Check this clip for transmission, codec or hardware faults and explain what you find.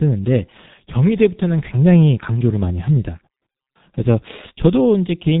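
One codec fault runs through the whole recording. From start to finish the speech sounds muffled and hoarse, with consonants smeared together. That is heavy G.723.1 codec damage. Nothing passes above 3.8 kHz, and the coarse 30 ms frames update the voice model too slowly to track quick changes, which fits a bitrate around 6 kbit/s.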